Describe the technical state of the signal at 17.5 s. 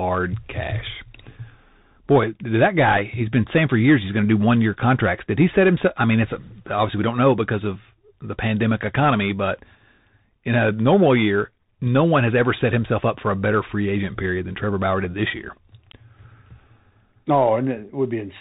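At 17.5 s the speech carries Bluetooth CVSD headset codec damage, present throughout. One-bit up/down steps with an adapting step size, consistent with 64 kbps, cut everything above 4 kHz and rasp s sounds. A spectrogram shows a hard 4 kHz ceiling over grainy hiss; the waveform shows slope-limited, stepped edges.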